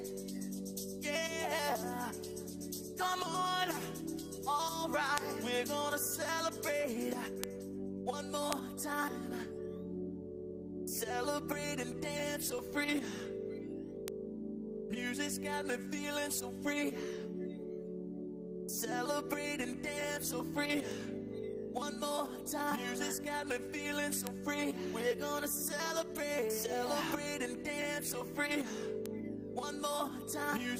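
Bit error spikes occur at 5.18, 7.44, 8.53, 14.08, 20.91, 24.27 and 29.06 s. Each is a flipped bit that jumps a sample or a few by a power of two and snaps back, heard as a sharp broadband tick peaking about -11 to -23 dBFS.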